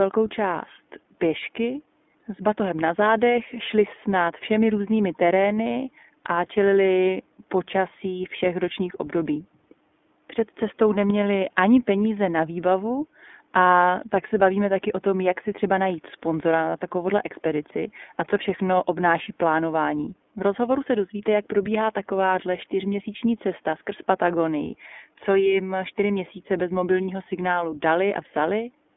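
Throughout, the iLBC codec squeezes the speech into a 200 Hz to 3.5 kHz band, sounding rough and synthetic; a spectrogram shows nothing above 3.5 kHz.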